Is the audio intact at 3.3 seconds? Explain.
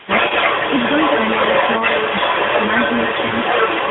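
No. Lost AMR speech frames hit 3.28 to 3.33 s: about 40 ms of corrupted data, which fits two 20 ms frames, failed their checks, so the narrowband decoder repeated its last good pitch and vocal tract settings at falling gain. This is heard as a brief smeared dip before the speech returns weak for a moment.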